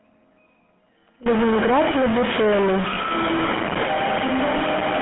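Throughout, the speech has the buzzy, gravelly roughness of the GSM full-rate codec. It models the vocal tract and excites it with sparse regular pulses, which fits a 13 kbit/s stream. The band runs only from 150 Hz to 3.4 kHz. The damage is plainly audible.

From 1.26 s to the end, a distortion rides on the sound. Quiet gaps fill with noise instead of falling silent. The likely cause is a stuck bit, one data bit held fixed and shifting many sample values by its weight.

At 2.94 s and again at 4.58 s, there is a brief rough, metallic ring. Each is a single lost GSM frame of about 20 ms. The decoder filled each gap by repeating the last good frame's settings.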